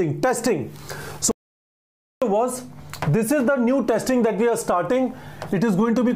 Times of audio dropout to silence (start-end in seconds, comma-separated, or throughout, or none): 1.31-2.22